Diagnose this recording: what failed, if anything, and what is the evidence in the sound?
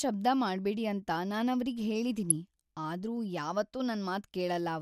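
DAB burbling at the codec stage, fed by weak broadcast reception. At 2.30 s, right after "ಶಬ್ದ ಮಾಡ್ಬೇಡಿ ಅಂತ ನಾನವ್ರಿಗೆ" and before "ಆದ್ರೂ ಯಾವತ್ತೂ", a brief burble sits over the speech. A small share of bits slipped past error correction, roughly 0.15 percent, which fits marginal signal strength. Corrupted samples in the MP2 data put short noise blips into single sub-bands. That gives the burble.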